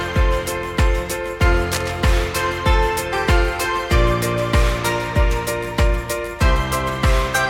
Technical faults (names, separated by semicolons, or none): cable scratch noise